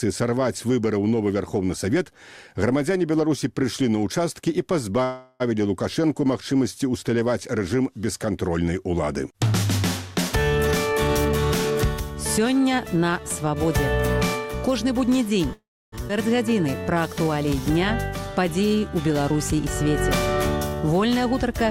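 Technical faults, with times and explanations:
5.03–5.42 s and 15.53–15.94 s, call audio freeze. At 5.03 s the sound halts and the last moment is carried on as a fading buzz for about 365 ms. At 15.53 s it halts again for about 390 ms, and the fill dies to silence for about 290 ms of that. Each time the audio resumes where it stopped, so nothing is lost and the delay grows. Packets held up on the way, emptying the jitter buffer, are the likely cause.
10.60–15.03 s, jitter buffer speed-up. The audio runs about 8% fast here, with pitch unchanged, so it sounds hurried. The receiver was trimming short pitch-period pieces again and again, roughly 400 ms in total, to shrink an overfull buffer.
16.08 s, skip ahead. Playback jumps forward with almost no gap. Roughly 300 ms of audio is gone, and the two sides are butted together. Audio was dropped while later audio already waited, so the delay falls by about that much.
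16.50–20.82 s, jitter buffer slow-down. The audio runs at about 95% speed, pitch unchanged, so sounds feel drawn out. The receiver repeated single pitch periods and slivers of pauses, adding 243 ms, to rebuild a low buffer reserve.
21.18–21.68 s, jitter buffer speed-up. A second, sharper speed-up runs at about 113% speed with pitch held. Roughly 70 ms is trimmed in small pieces to cut excess buffered delay, so this closing stretch sounds rushed.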